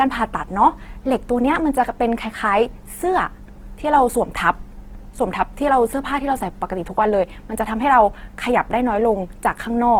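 All the way through, the speech sounds grainy, rough and noisy, even though the band stays wide, up to about 20.4 kHz. That's likely Opus compression in its music mode, filling starved bands with noise, which fits a bitrate around 16 kbps.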